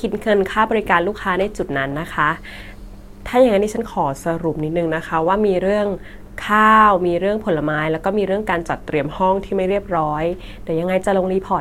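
Speech that drops about 6% slower and a semitone flat from 3.86 to 5.28 s and again from 8.61 to 9.70 s, then snaps back: likely a drift correction step.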